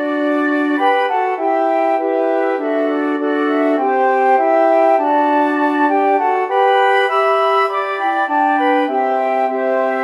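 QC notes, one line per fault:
No technical faults are audible anywhere in the signal.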